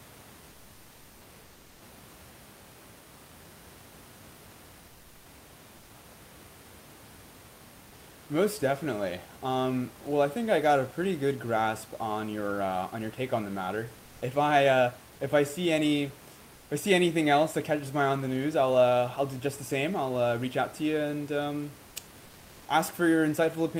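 From 1.43 to 1.81 s, the sender likely paused transmission during silence, so the receiver synthesised 380 ms of comfort noise in place of the background: the room noise, about 26 dB below the speech, turns flat, featureless and about 2 dB quieter.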